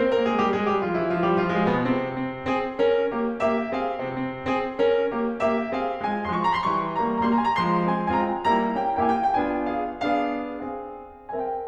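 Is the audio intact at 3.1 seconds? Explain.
Yes, the music plays through cleanly at 3.1 seconds, with no audible fault at that moment.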